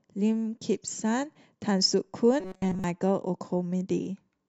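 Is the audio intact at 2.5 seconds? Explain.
No. From 2.40 to 2.84 s there is robotic sound from repeated short buffers: the speech becomes a rigid metallic buzz near 188 Hz, likely because a roughly 5 ms chunk was replayed while most real audio was skipped. A spectrogram shows evenly spaced harmonic stripes, and the waveform shows identical repeating cycles.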